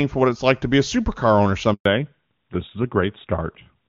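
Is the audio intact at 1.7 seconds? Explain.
No. The speech fades out within a few tens of milliseconds into 120 ms of silence, from 1.73 to 1.85 s. This is a handover gap: no speech frames arrived while the call switched networks.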